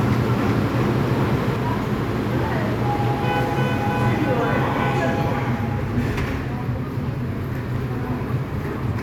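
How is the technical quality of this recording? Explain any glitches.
Two kinds of glitch affect the recording: a doubled opening and two brief decoding faults.

Doubled audio track, from the start until 1.56 s: a full-band copy of the sound trails the original by around 0.4 s at about the same loudness, likely from a second, slower capture path or two misaligned copies in an edit. It has no decay or room colour, and it cuts off abruptly at 1.56 s.

Damaged data in a compressed stream, at 4.24 s and 8.90 s: corrupted bytes made the decoder misread frames, lose sync and search for the next frame header. Each fault is a short chirp or blip lasting under 20 ms.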